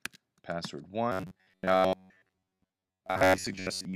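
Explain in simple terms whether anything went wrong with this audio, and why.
From 1.12 s to the end, new audio likely arrived too slowly, so the system kept replaying its last sliver of about 11 ms instead. Most of the sound became robotic sound from repeated short buffers: a rigid, metallic 93.8 Hz buzz.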